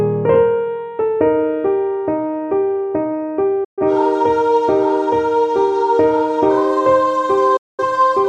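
At 3.64 s and again at 7.57 s, a digital broadcast dropout cuts the sound. The receiver lost good frames and muted. Each gap fades out in about 8 ms. About 128 ms and 213 ms of programme are missing.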